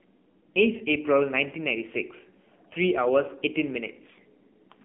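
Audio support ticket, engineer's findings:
AMR narrowband mobile codec, whole clip. Speech band-limited to 200 Hz–3.5 kHz, plainly audible codec damage: buzzy, synthetic vocal quality from the 20 ms frame vocal-tract model running short of bits; fits a low AMR-NB mode near 7.4 kbps. Spectrogram: flat ceiling at 3.5 kHz, nothing above, empty below 200 Hz. Probable component: mobile network leg or transcoding gateway.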